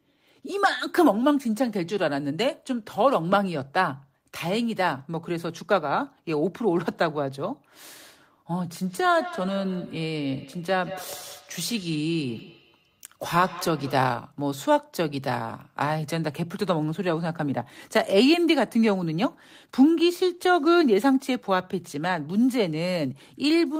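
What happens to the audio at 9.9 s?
At 9.9 s the speech is caught in a feedback echo between two devices, running from 8.81 to 14.13 s. A second device replays this microphone's signal, which is picked up again, so each word returns every fifth of a second or so, about 16 dB down, growing thinner and more ringing, unlike a single acoustic echo.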